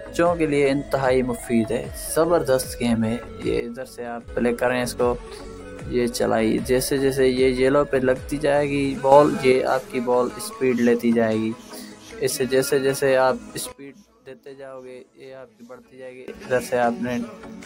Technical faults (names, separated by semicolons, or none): sudden gain jump